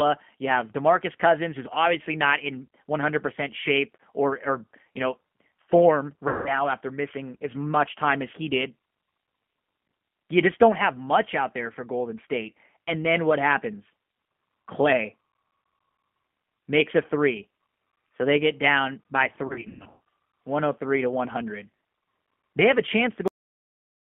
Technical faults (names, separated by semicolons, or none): G.729 codec; VoIP packet loss concealed by the speech codec; cut-off end